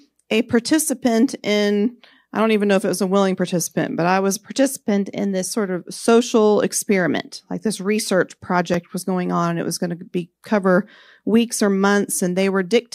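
At 8.74 s, between "this research" and "was going on and", and again at 12.12 s after "be cover weeks or", the speech jumps, likely a dropped buffer (overrun) losing a few milliseconds. Unlike a dropout, no silence is inserted; the two sides simply butt together.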